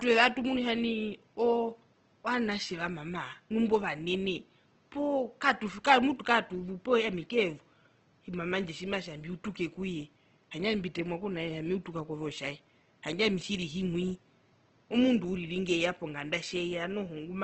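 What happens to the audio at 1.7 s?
At 1.7 s the speech has the same damage it carries the whole way through: Opus compression, likely from Opus running in its CELT music mode at a low rate, which fits about 16 kbps. The encoder keeps each band's overall energy but fills in detail it can't afford by folding lower bands up or adding noise, so the speech turns grainy and rough, with plainly audible codec damage. The room noise sits quietly underneath, about 36 dB below the speech.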